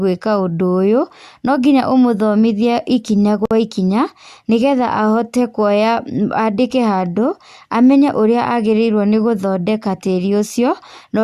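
At 3.45 s to 3.51 s the speech stops for about 54 ms, a gap at a join of encoded pieces. Two separately encoded segments were spliced without trimming the encoder's start delay and end padding. Unlike a dropout, nothing is lost: the sound resumes exactly where it stopped, with smeared edges.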